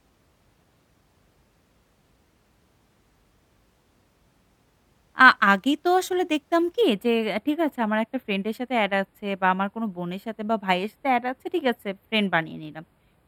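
From 6.81 s, channel delay (comb filtering): a roughly four-sample lag leaves a fixed, non-sweeping notch near 7 kHz, giving the speech a hollow, phasey sound, unlike flanging.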